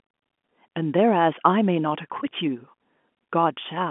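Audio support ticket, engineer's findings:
No fault found in this speech clip. G.711 telephone coding is working as designed, with audio confined to the 200 Hz to 3.4 kHz line band and nothing heard above about 3.7 kHz.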